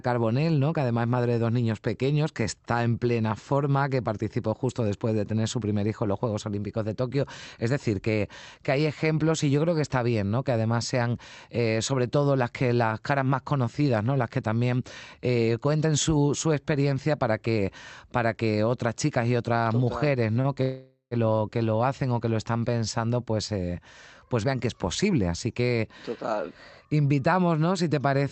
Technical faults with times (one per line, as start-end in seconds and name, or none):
20.41-20.47 short stall from a late packet
20.62-21.14 call audio freeze
22.98-23.53 jitter buffer speed-up
24.01-26.50 jitter buffer speed-up